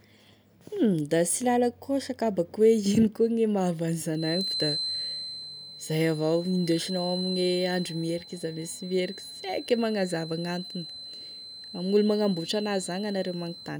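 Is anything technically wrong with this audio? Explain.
Yes, there's a feedback whistle. From about 4.1 s right through to the end at 13.8 s, a thin, steady tone at 4.1 kHz sits behind the speech, roughly 10 dB below it, and its level swells and fades slowly. The likely cause is the loudspeaker-to-microphone loop hovering right at the edge of feedback: one high frequency keeps getting reinforced enough to keep ringing on its own, but not enough to run away into a full howl.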